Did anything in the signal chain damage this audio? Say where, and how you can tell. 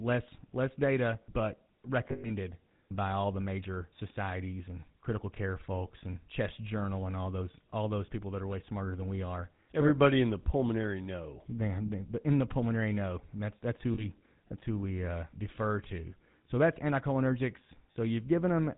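Yes. At the codec stage, this is the GSM full-rate codec throughout, and its damage is plainly audible. There's nothing above 4 kHz and a buzzy, gravelly roughness on everything, which fits 13 kbps full-rate coding: a vocal-tract model driven by coarse, regularly spaced pulses.

Further along, in transmission, there are lost GSM frames. Around 2.08 to 2.30 s, just before "by all the major", a scattered patch of dropouts (the longest run is around a tenth of a second) gives a rough, metallic ring. There are shorter 40 ms blips at 13.94 s, right after "that's who", and at 17.92 s, after "that's anticholinergics". The decoder is papering over the gaps by repeating the last good frame at falling level.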